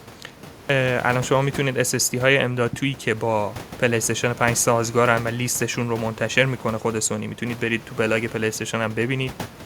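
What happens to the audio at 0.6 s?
At 0.61 s the speech comes back after a 0.32 s pause with a clipped start after a pause. The output path appears to have dozed off in the silence and needed time to wake. Roughly 85 ms of sound, up to 0.70 s, never reaches the listener. The speech therefore starts abruptly, with its opening sounds missing. The room noise, about 19 dB below the speech, is part of the recording.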